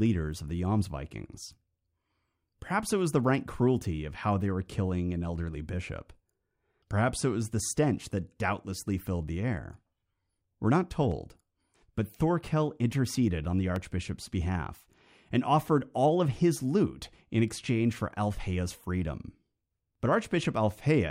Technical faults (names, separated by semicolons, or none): dropped samples